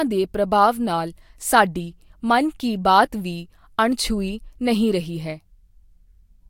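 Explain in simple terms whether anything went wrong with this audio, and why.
Nothing went wrong: the speech holds steady throughout, with no audible fault at any point.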